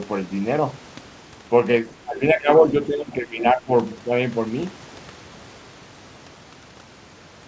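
An echo canceller that likely could not tell the near talker from loudspeaker echo while both sides spoke at once pulled this speech down between 2.04 and 3.71 s, a case of speech suppressed in double talk. The voice dips by about 15 dB at its deepest and drops in and out for roughly a second in total. Throughout, nothing is heard above 8 kHz, consistent with the G.722 call path.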